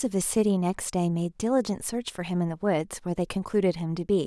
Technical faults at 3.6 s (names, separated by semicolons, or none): none